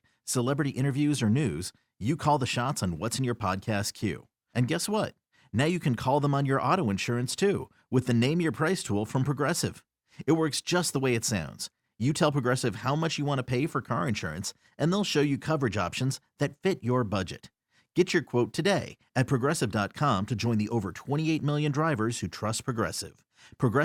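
Nothing in this speech recording stands out as a technical fault, so there's nothing to flag here.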